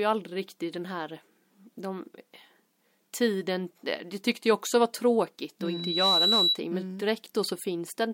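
In this speech clip a microphone picks up its own loudspeaker, and loop gain tips past unity near 3.9 kHz, producing loudspeaker feedback squeal from 5.61 to 6.59 s. After "också var tråkigt att", a pure tone swells over roughly half a second to sit a few dB above the speech, clearing before "men mm".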